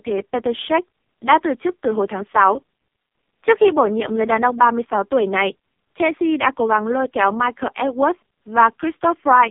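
Throughout the speech, the AMR narrowband mobile codec limits the band to roughly 200 Hz to 3.5 kHz, with nothing above 3.7 kHz. The heavy buzzy, synthetic coloration fits AMR-NB's lowest 4.75 kbps mode, where few pulses drive the vocal-tract model.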